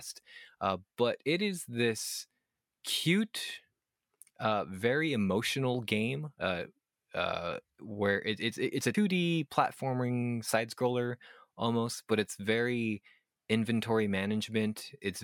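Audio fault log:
8.94–8.98 s, damaged data in a compressed stream: for about 30 ms the speech gives way to a short glitch. Bytes in the encoded stream at this point are corrupt, so the decoder misreads those frames, loses sync and hunts for the next valid frame header before normal decoding resumes. On a spectrogram this appears as a thin vertical break in the speech harmonics; the waveform shows an abrupt discontinuity.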